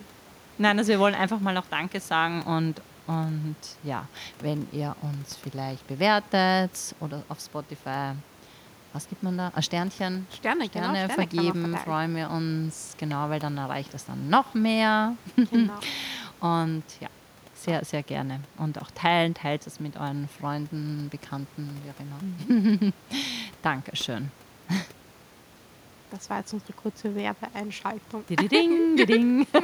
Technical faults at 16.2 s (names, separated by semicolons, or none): none